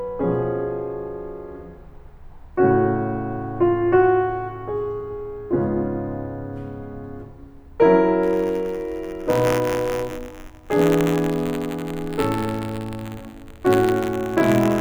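Buffer tearing sets in at 8.22 s and runs to the end of the music. The writing side and the playback hardware have drifted out of step, so every buffer period holds a small sliver of audio about 20 ms stale, joined on both edges by abrupt seams. Those seams repeat at 93.8 Hz, which fits a 512-sample buffer, and produce a rough, robotic buzz riding on the music wherever sound is present.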